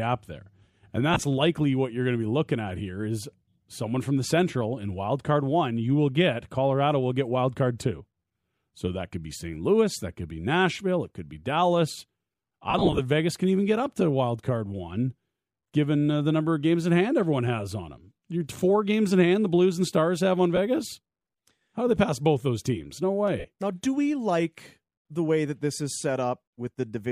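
Around 1.14 to 1.22 s, a burst of lost LE Audio frames punches roughly 52 ms of gaps into the speech, with the longest run around 20 ms. The decoder papers over them by replaying the last spectrum with scrambled phase, so you get a brief hissy smear. The worst one is 12.70 to 13.00 s: about 150 ms gone across nearly 285 ms, with runs of around 40 ms. Smaller hits follow at 20.56 to 20.58 s and 23.39 to 23.45 s. The light graininess elsewhere is likely just the LC3 coding.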